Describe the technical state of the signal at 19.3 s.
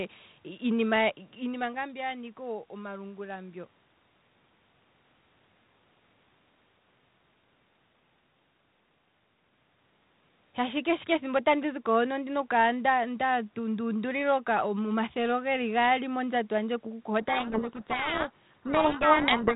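At 19.3 s the speech lies inside a codec payload misread running from 17.21 s to the end of the clip. The G.726 code words arrive with their bits in reversed order, so the decoder rebuilds wrong differences and buries the speech in harsh distortion. Unlike low-bitrate G.726 hiss, it begins abruptly rather than tracking level throughout.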